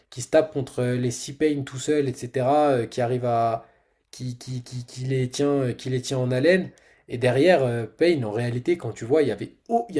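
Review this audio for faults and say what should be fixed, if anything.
Nothing in this speech recording needs fixing. No faults can be heard anywhere in it.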